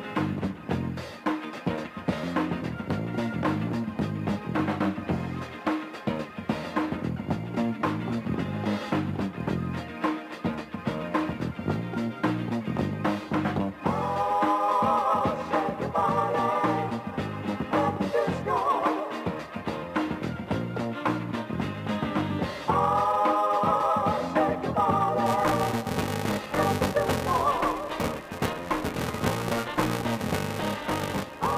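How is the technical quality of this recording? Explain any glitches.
The recording has one clear fault, confined to the final stretch. From 25.26 s to the end at 31.58 s there is a filter restarted on every block. The filter discards its internal state at each block boundary and begins again from silence, so each block opens with a small transient. These repeat as a steady buzz at 345 Hz, which fits a 128-sample block, and the buzz rises and falls with the level of the sound.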